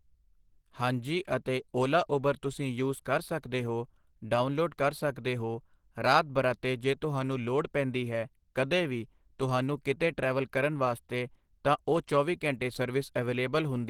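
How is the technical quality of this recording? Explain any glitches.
The quality is compromised. Throughout, the speech sounds hoarse, grainy and muffled. The likely cause is Opus compression at a low bitrate near 16 kbps, coding speech roughly with filled-in noise.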